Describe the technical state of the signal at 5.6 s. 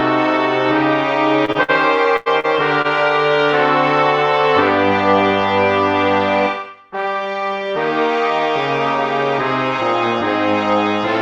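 At 5.6 s the audio is intact, with nothing beyond the ordinary character of the call codec path it passed through.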